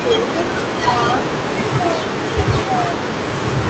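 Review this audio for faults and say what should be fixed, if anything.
Between 1.19 and 1.36 s a faint, delayed copy of the speech surfaces, trailing the original by 338 ms at roughly 10 dB below it. This is an echo leak, likely from a far end on loudspeaker whose echo canceller let part of its microphone pickup return. A spectrogram shows a weaker, right-shifted repeat of the earlier harmonic pattern, and the waveform gains a low secondary envelope. Better far-end echo cancellation, or a headset, would prevent it.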